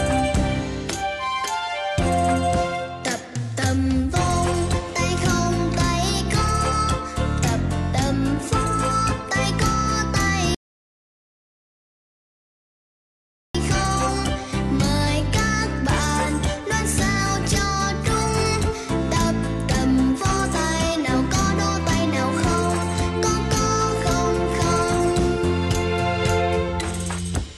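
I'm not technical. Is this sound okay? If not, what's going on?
No. There's a rebuffering stall from 10.55 to 13.55 seconds. The player ran out of downloaded audio, went silent for 3 seconds while waiting for more to arrive, then picked up exactly where it stopped. Nothing is missing, but the pause adds time.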